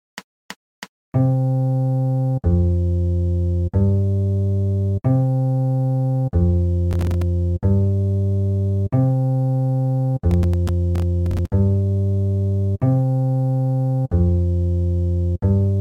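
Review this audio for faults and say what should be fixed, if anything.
Processor overload crackle occurs at 6.91–7.22 s and 10.31–11.52 s. The processor repeatedly missed buffer deadlines, and each miss left a silent gap of a few milliseconds. The waveform shows dense hard-edged dropouts, and the spectrogram shows vertical broadband streaks. Reducing processing load or enlarging buffers prevents this.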